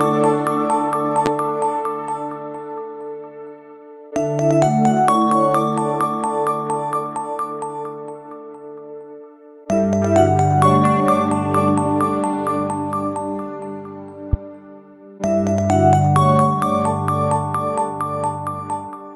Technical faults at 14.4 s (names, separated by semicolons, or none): loud pop